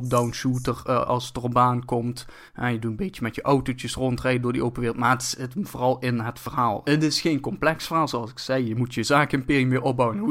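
It's a speech recording with two faults right next to each other, around the six-and-a-half-second mark. At 6.46 s there's a tiny skip where a sliver of audio, roughly 20 ms, just vanishes and the two sides butt straight together with no gap of silence. That's the signature of audio missing between chunks: whatever captured or processed this was most likely working in blocks and dropped a bit at the handover. The chunks were likely 4 seconds long, though only this one join shows up as a skip. Then at 6.86 s the sound jumps forward abruptly, which sounds like a stream segment skipped. The player likely lost a piece of the segmented stream and carried on from the next one, so the audio lurches ahead at that point instead of running continuously.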